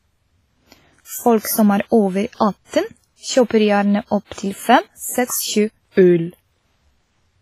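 WMA compression runs through the whole speech clip: a ringing, washy hiss breathes with the signal and nothing remains above 15.2 kHz, likely from a low bitrate around 24 kbps. Pre-echo at 5.91 to 5.97 s: a sharp attack late in a transform block smears about 57 ms of hiss ahead of it, softening the onset.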